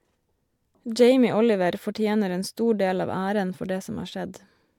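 Recorded speech, with no technical fault to report. Nothing at any point in the audio calls for a time, a value or a cause.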